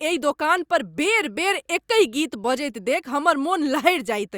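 No technical faults are audible.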